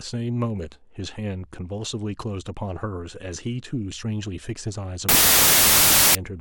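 From 5.09 s to 6.15 s the speech dissolves into loud, harsh noise, with the original only faintly audible underneath, slowed to 0.667 times speed and lowered in pitch to match. This is a wrong sample width fault, consistent with packed 24-bit data being read as 16-bit, so many values are built from mismatched bytes. On a waveform the section becomes dense and noise-like. A spectrogram shows broadband noise covering every band, with faint, compressed speech harmonics beneath.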